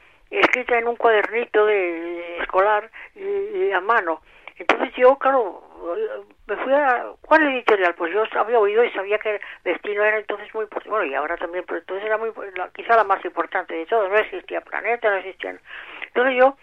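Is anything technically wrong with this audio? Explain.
No, the signal shows no technical faults anywhere in the recording.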